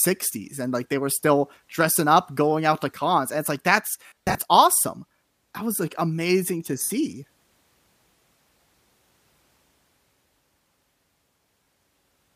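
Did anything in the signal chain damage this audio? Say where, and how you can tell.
Yes. The damage is at the Bluetooth link: lost LE Audio frames. After "and it's like that's", 4.04 to 4.38 s turns into a noisy smear. Shorter smears follow "was like amazing to" at 6.83 s, and come again at 11.63 s. The decoder, likely LC3, refills each gap with the last spectrum under random signs.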